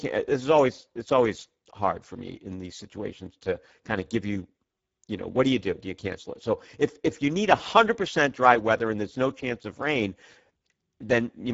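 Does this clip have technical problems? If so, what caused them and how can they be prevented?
Yes. The speech carries Speex codec damage throughout: it sounds hoarse and noisy, because this low-bitrate CELP coder has too few bits to model the excitation behind the voice, which points to a setting near 10 kbps. On a spectrogram, energy stops sharply at 7.7 kHz and harmonics look smeared and grainy. The waveform envelope looks normal, so the damage appears only in the spectrum. To prevent it, encode with a higher Speex quality setting or use a modern codec such as Opus.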